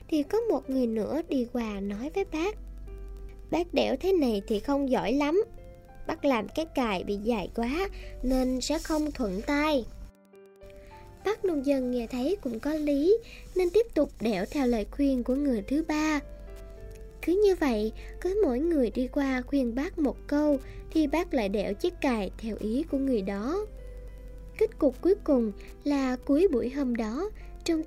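Running through the whole clip there's a faint, steady ticking at about ten clicks a second, sitting well under the main sound, roughly 40 dB down. That's Wi-Fi interference: a nearby Wi-Fi radio's beacon bursts are being picked up and rectified by the audio circuit, turning each one into a click. The spacing is 102.4 ms, which is the standard beacon interval, so the ticks land with metronome-like regularity from start to finish.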